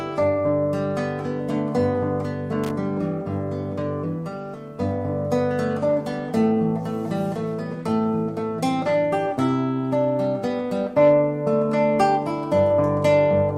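At 2.64 s a short burst of loose connector crackle runs for about 70 ms, to 2.71 s. A worn or dirty contact briefly makes and breaks, chopping the signal into an irregular scratchy spatter. Unlike a single digital click or a clean dropout, its bursts are uneven and rough-edged.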